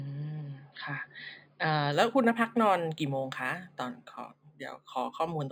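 From 1.92 s to the end at 5.52 s, the speech shows imaging from linear upsampling. The sample rate was raised by joining samples with straight lines, which filters poorly. The top of the original band sounds dulled. A mirrored copy of the spectrum sits between 5.5 kHz and 11 kHz, roughly 30 dB below the signal. This fits an 11 kHz source raised to 48 kHz. It adds a faint metallic shimmer to sibilants.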